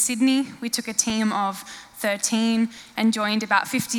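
At 1.10 s the audio drops out in a block of digital silence lasting about 2.9 ms, heard as a tick; the abrupt zeroed span fits a 128-sample buffer left unfilled.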